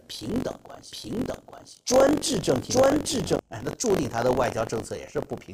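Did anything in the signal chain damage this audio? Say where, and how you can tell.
Yes. A steady robotic buzz at about 46.9 Hz rides on the speech from start to finish and drops away in the pauses. That is buffer tearing at the driver or buffer stage. The writer and the hardware reader of the ring buffer have slipped, so in every period roughly a tenth of the buffer still holds audio from about 40 ms earlier, with hard joins on both sides. The buzz rate fits a 1024-sample buffer.

From 0.92 s to 3.36 s the speech is heard twice: a second full-band copy trails about 0.7 s behind at roughly the same level. It has no decay or room colour, and it cuts in and out abruptly at those times, so it is a doubled audio track and not an echo. The likely cause is the same signal being captured again through a slower path, or an edit that leaves two copies out of step in the mix.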